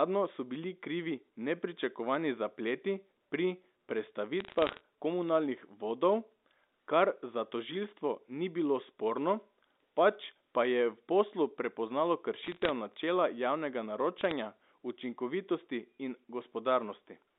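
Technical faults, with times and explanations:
4.40 to 4.80 s, 12.44 to 12.70 s and 14.18 to 14.31 s: bit errors on a digital phone line. Brief bursts of sharp ticks and crackle ride over unchanged speech. A few tenths of a percent of bits flipped, each corrupting one 8-bit sample. Sign or high-bit hits give the loudest clicks.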